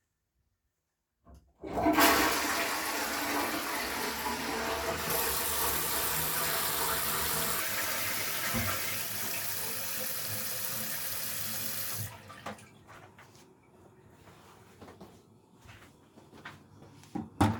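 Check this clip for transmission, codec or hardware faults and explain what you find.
One fault stands out: a section at the wrong speed. From 7.60 s to the end, the audio runs 1.37 times too fast, likely from being played or resampled against the wrong clock, so pitch jumps up about five semitones and everything sounds hurried and squeaky together.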